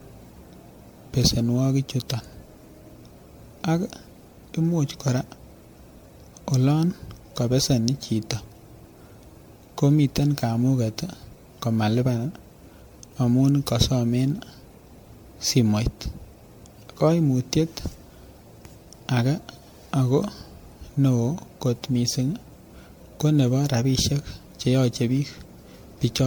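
Generation loss throughout: swirly, hollow, smeared speech, likely from about ten MP3 passes near 96 kbit/s. A spectrogram shows scattered holes and smeared onsets below 20 kHz.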